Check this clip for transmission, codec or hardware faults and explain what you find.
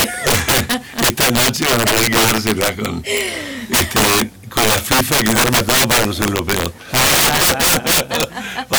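There's one fault, and it runs through the whole clip. Integer overflow: the signal is pushed about 13 dB too hot, so roughly one sample in fourteen wraps to the opposite sign, giving harsh cracks on every loud peak.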